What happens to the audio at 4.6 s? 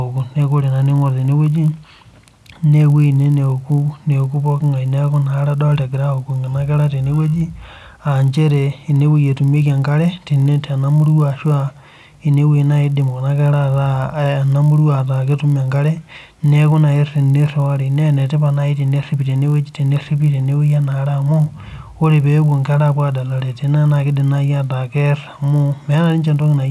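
A 50 Hz buzz rides on the speech, as it does throughout. The resampler restarted on every block, so each 20 ms block's edges were converted from 48 kHz to 24 kHz without their neighbours.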